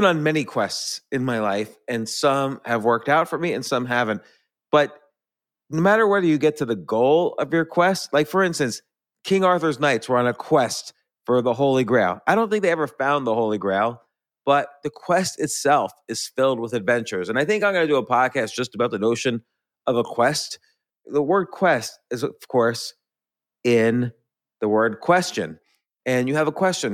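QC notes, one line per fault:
No faults found anywhere in the speech.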